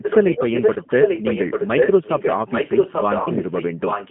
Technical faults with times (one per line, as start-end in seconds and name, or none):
0.00-4.11 G.729 codec
0.02-4.11 echo leak
0.74-0.80 VoIP packet loss concealed by the speech codec
3.22-3.29 VoIP packet loss concealed by the speech codec